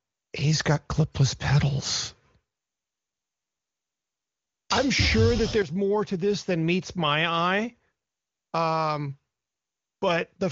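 Speech carried over an AMR wideband (HD Voice) link at 23.85 kbit/s, with nothing technically wrong to point to anywhere in the clip.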